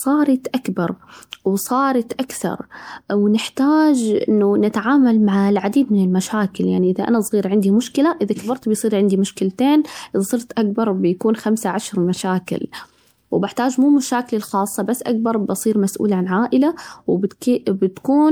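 Across the whole speech clip the sound has a swirly, smeared, hollow quality, with consonant attacks softened, more damage than a single 128 kbit/s MP3 pass would leave, though the band still reaches about 20.9 kHz. This is likely generation loss: repeated decoding and re-encoding, consistent with roughly five MP3 passes, each quantising on a shifted frame grid so that noise and spectral gaps accumulate.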